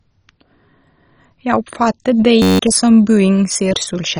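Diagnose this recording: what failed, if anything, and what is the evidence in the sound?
The speech sounds dull throughout, with nothing above 10.4 kHz. Upper bands drop in and out, and what remains is gurgling and granular. This is likely MP2 compression at a low rate around 32 kbps. The codec starves its sub-bands of bits and switches the highest off.

From 2.42 to 2.59 s a steady buzz replaces the speech. A 10.67 ms slice repeats 16 times, giving a 93.8 Hz tone. This is a system hang loop at the driver or buffer stage. The loop fits a 512-sample ring buffer. About 150 ms of audio is lost.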